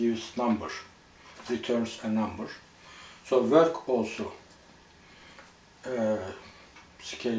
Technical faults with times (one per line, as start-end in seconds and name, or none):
none